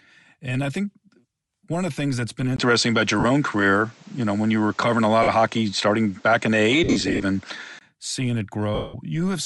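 Bluetooth LC3 compression runs through all of this speech recording, with plainly audible codec damage: a breathy, grainy edge where the upper spectrum has been thinned and filled with noise, likely from the LE Audio codec working at a rate that fits 48 kbps in 10 ms frames. An input likely switched to a poorer device spans 2.56 to 7.81 s, just after "the things that's been": a 20 ms gap opens, the level shifts by about 5 dB, nothing survives above 8.3 kHz, and a new background noise sits roughly 35 dB under the signal, so the sound turns duller and boxier until it clears again. Lost LE Audio frames break in at 3.20 to 3.25 s (40 ms), 5.23 to 5.28 s (50 ms), 6.84 to 7.22 s (230 ms scattered over 380 ms, the longest run around 70 ms) and 8.75 to 8.95 s (190 ms). In each gap the decoder replays the last spectrum with scrambled signs, so the sound becomes a noisy smear, and the longer losses fade away toward silence.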